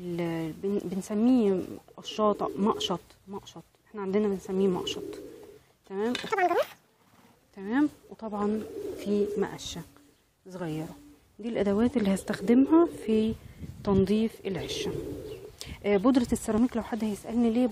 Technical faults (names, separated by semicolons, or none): overlap between stream segments; section at the wrong speed